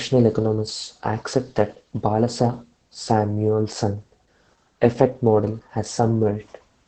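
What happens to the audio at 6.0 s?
At 6.0 s, as throughout, Opus voice compression in SILK mode strips everything above 8.5 kHz and coarsely codes the excitation, which fits roughly 10 kbps, leaving speech muffled, hoarse and faintly robotic.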